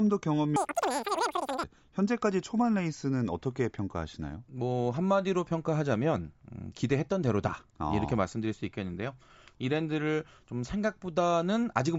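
From 0.56 to 1.64 s there's a wrong sample rate fault. The speech suddenly goes chipmunk-like, running three times too fast and pitched up by about 19 semitones. Speed and pitch jump together by the same factor, which tells you the samples were pushed out faster than they were captured, with no rate conversion. A threefold jump fits 16 kHz material being played back at 48 kHz.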